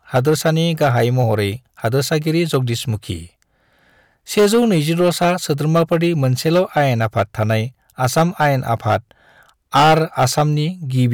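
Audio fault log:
throughout: hard clipping. The speech is driven roughly 14 dB past the level the chain can pass, so a few percent of samples have their peaks sliced flat. Those squared-off tops add high harmonics, heard as harsh fuzz riding on every loud syllable.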